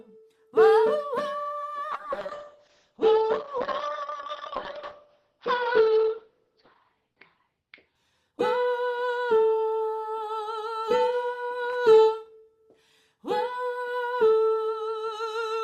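From 1.94 s to 8.77 s there is a call bitrate drop. The encoder is starved of bits, which fits a fall from about 48 to 7 kbps, so coding turns coarse and bandwidth narrows from 20 kHz to 6 kHz. The sound goes muffled and watery, worst for about 4.8 s.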